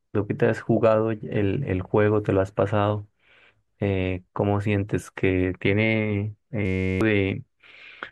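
At 6.66 s the playback system locks up in a system hang loop. The computer or driver stalls while the sound hardware keeps replaying one small slice of its ring buffer. Each cycle lasts 10.67 ms, which fits a 512-sample buffer, so until 7.01 s the speech is replaced by a steady buzz at about 93.8 Hz. Roughly 0.4 s of speech never reaches the output and is simply missing when the audio resumes.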